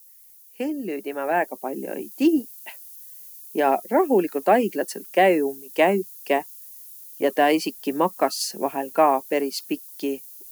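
From the start and throughout, low bit depth with noise shaping adds a steady, thin hiss that climbs sharply toward the top of the band, consistent with 8-bit samples. The rounding error is pushed upward in frequency, sitting only around 20 dB below the speech. A spectrogram shows a constant haze that brightens toward the highest frequencies.

From 0.57 to 2.2 s, automatic gain rising lifts the level by about 8 dB as the gain control, judging the input too quiet, ramps up. Speech and background swell together. The waveform envelope widens steadily over that span rather than jumping.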